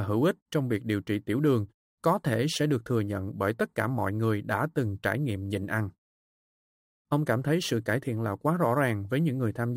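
Throughout, crude rate conversion duplicates samples without filtering, fitting a 32 kHz to 44.1 kHz change, leaving inharmonic fizz roughly 30 dB below the speech.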